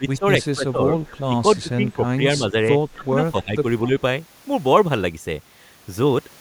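From the start to 0.91 s the speech keeps dipping by about 10 dB for roughly half that span. This is speech suppressed in double talk, likely an echo canceller that could not tell the near talker from loudspeaker echo while both sides spoke and so turned everything down. The same dips return at 1.28 to 1.35 s, 1.62 to 2.02 s, 2.38 to 2.74 s (shallower, around 5 dB) and 2.96 to 3.65 s (deepest, around 15 dB). On a waveform these show as sagging envelope stretches. A spectrogram shows the harmonics fading in patches.

At 1.05 to 1.2 s and again at 1.56 to 1.61 s a faint copy of the speech arrives 255 ms late, well below the main voice. This is echo leak, likely with some loudspeaker sound getting past cancellation and returning. On a spectrogram it appears as a weak smear that repeats the earlier harmonic pattern, offset by a quarter second.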